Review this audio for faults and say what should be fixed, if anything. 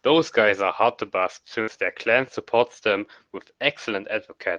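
A burst of packet loss struck between 1.61 and 1.69 s. The receiver stretched the last received speech sound across 60 ms and faded it, heard as a brief held buzz or hiss, then resumed with 60 ms skipped. Adding forward error correction or packet redundancy would help recover such bursts.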